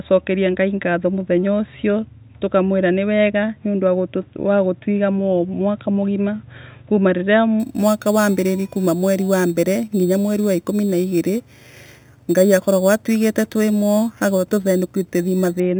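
Imaging from sample-and-hold upsampling runs from 7.60 s to 15.60 s. Each sample was held rather than filtered, which fits a jump from 8 kHz to 48 kHz, so mirrored speech spectrum fills 4 kHz to 8 kHz at about 20 dB down, a metallic fizz tracking the speech and moving against its pitch.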